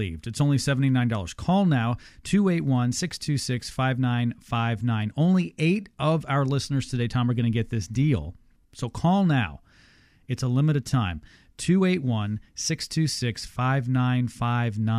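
No technical faults can be heard anywhere in the speech.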